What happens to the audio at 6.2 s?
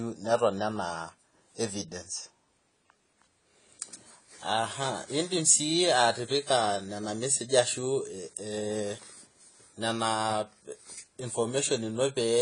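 At 6.2 s you're hearing the same thing that runs through the whole clip, likely AAC compression at a low bitrate, which fits about 24 kbps. Nothing comes through above 10 kHz, so the speech sounds dull and smeared, with a warbly, fizzy edge on sibilants.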